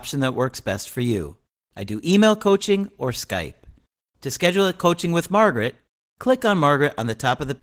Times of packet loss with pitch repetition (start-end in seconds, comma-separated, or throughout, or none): none